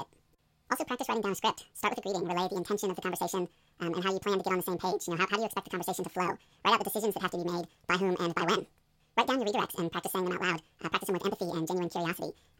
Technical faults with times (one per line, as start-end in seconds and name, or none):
0.00-12.59 audio read two samples at a time (double speed)